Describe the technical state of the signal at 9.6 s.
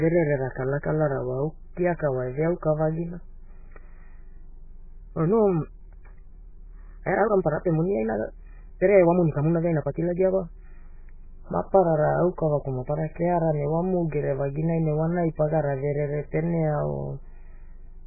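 At 9.6 s the speech sits inside a time-stretched section running from 4.95 to 10.65 s, where the pace jumps to about 1.54 times normal while pitch holds steady. This is likely software compression of timing, dropping short slices to fit a shorter length, so delivery sounds rushed.

Over the same moment, heavy MP3 compression damage is present. Weak frequency components flicker between frames, giving a watery, swirly texture with smeared consonant attacks. This fits a likely very low bitrate, around 8 kbps.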